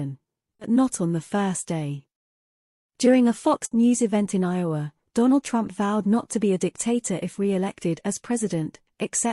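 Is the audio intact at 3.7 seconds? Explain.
No. There's a burst of packet loss from about 3.65 to 3.73 s. A short run of audio never arrived in time to be played, so the receiver held onto the last bit of sound it had and kept it going while turning it down, which fills about 60 ms with a fading smear. Playback then jumps ahead, and the roughly 60 ms in between is simply gone.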